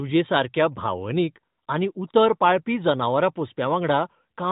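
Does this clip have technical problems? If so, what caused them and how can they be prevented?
No, the speech carries no technical faults, and its content stops at about 3.8 kHz, consistent with the AMR narrowband mobile codec running at 12.2 kbps.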